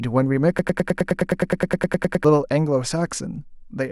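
At 0.59 s the speech locks onto a tiny fragment about 0.10 s long and stutters it back to back, 16 identical repeats in a row, a rapid mechanical buzz-like chatter that runs until 2.25 s before normal playback resumes. This is a broken-record loop, likely caused by a stalled player, encoder or stream that kept replaying the last chunk it held. Whatever was said during those 1.7 seconds is gone.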